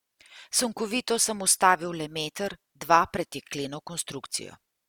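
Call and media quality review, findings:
Speech throughout the clip carries the artefacts of an earlier encoding despite the large file. Content stops near 20.2 kHz. Points to low-bitrate audio saved at a high bitrate: likely an earlier lossy pass (Opus-like, fitting roughly 48 kbit/s) re-encoded as MP3 at about 192 kbit/s, which cannot restore removed detail.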